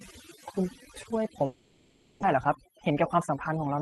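Throughout the speech, overdone noise removal is audible: the background sits near silence with small twinkling specks, and quieter parts of the voice were pulled down along with bands the suppressor judged to be noise.

From 1.45 s to 2.24 s the sound turns into a continuation of the last syllable as a buzz or hiss that decays but never falls fully silent, with about 0.62 s of speech absent when it resumes. This is likely a long network dropout, with the receiver's concealment filling roughly 0.77 s and the delay shifting by around 150 ms.

From 2.36 s to 3.81 s the speech runs about 6% fast at unchanged pitch, sounding slightly hurried. This is a jitter buffer speed-up: the receiver trimmed short pitch-period segments repeatedly, shedding roughly a tenth of a second in total.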